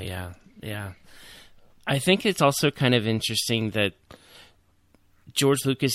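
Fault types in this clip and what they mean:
No technical fault can be heard anywhere in this speech recording; the signal stays continuous and stable throughout.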